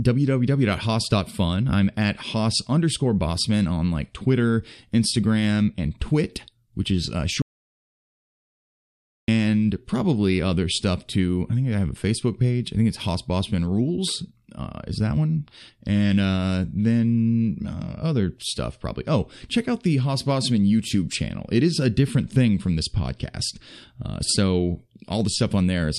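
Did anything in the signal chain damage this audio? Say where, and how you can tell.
Yes. An audio dropout to silence runs from 7.42 to 9.28 s, after "which is uh" and before "probably other stuff too". The gap is silent, with no room tone. About 1.86 s is lost. The input likely disconnected or muted upstream while the recorder kept writing zeros.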